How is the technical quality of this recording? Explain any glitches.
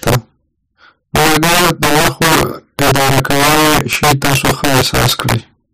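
The recording has one fault, running through the whole clip. Integer overflow: the speech was pushed about 7 dB past the integer limit. Around 7 percent of samples wrapped to the opposite sign, producing cracks on the louder peaks.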